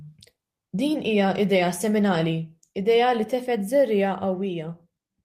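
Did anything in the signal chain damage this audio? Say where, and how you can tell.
No, nothing in this speech recording points to damage anywhere in the signal chain. No audible event ties a problem to wiring, conversion, transmission, storage or playback.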